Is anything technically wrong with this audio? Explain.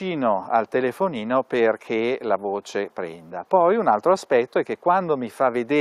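No, nothing technically wrong can be heard in this audio. It comes through with no audible glitches, breaks or distortion at any point.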